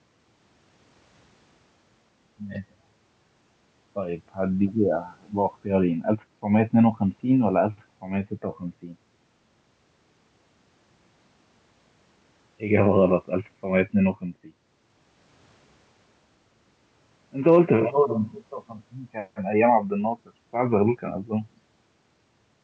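No technical faults can be heard anywhere in the speech. It carries the sound of ordinary call microphone processing, with the lowest bass trimmed away and nothing present above 8 kHz.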